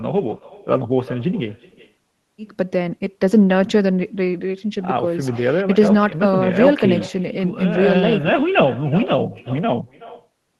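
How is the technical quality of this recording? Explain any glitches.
The main problem is an echo with no canceller, and it runs through the whole speech clip. The far end played the call on a speaker and its mic sent it straight back, so every phrase returns around 0.4 s later as a faint, thin copy, about 18 dB down. It came through an Opus-style call codec, with the top end stopping near 12 kHz.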